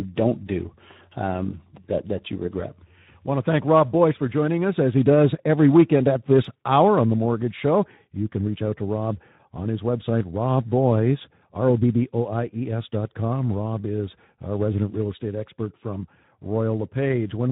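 Throughout, Speex codec damage is plainly audible: starved CELP excitation makes the speech hoarse and noisy, fitting roughly 11 kbps, with smeared, grainy harmonics on a spectrogram.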